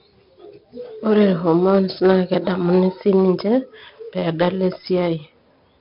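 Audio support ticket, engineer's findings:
4-bit ADPCM compression, throughout the speech. Heavy gritty hiss on every loud syllable. Noise follows the signal's level. Nothing above 5.3 kHz, pointing to a low sample rate, about 44 kbps. Step size lags sharp onsets, causing distortion on attacks.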